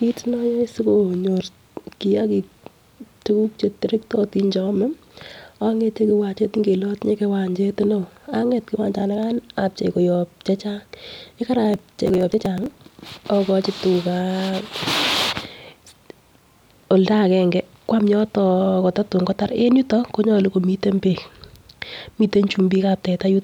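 From 11.74 to 12.75 s a gritty crackle tears through the speech: processor overload crackle, from dozens of missed deadlines, fitting buffers of about 5 ms.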